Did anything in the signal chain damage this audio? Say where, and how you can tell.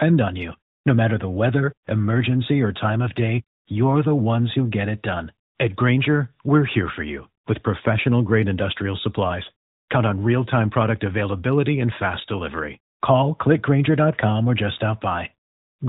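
No, nothing in the chain damaged this speech; it has simply been through the AMR narrowband mobile codec at its 12.2 kbps mode, working the way that phone path normally does.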